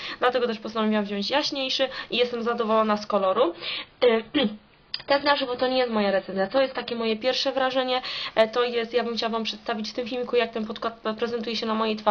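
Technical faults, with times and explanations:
3.19–7.19 s, adaptive stream at a lower bitrate: for four seconds the sound abruptly loses its treble, with nothing above about 5.1 kHz, and codec artefacts become more prominent, giving a thinner texture. The player switched to a lower-quality rendition of the stream and back again without any gap, which fits a step down from roughly 96 kbit/s to 16 kbit/s AAC-LC. At that rate the encoder discards high frequencies and quantises what remains coarsely.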